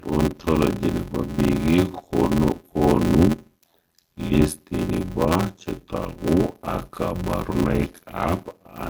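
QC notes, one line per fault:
throughout, transcoding between lossy codecs: two distinct kinds of compression damage are heard stacked, and the lowest cut-off in the chain remains. The doubled artefact character points to a likely MP3-to-low-rate-Vorbis chain, not one poor encode.
throughout, block size mismatch (padded): a steady buzz sits at 86.1 Hz while the speech runs at 0.625 of normal speed, yet pitch stays about normal. That fits 512-sample read blocks each ending in zero padding. A resampling slowdown would lower the pitch instead.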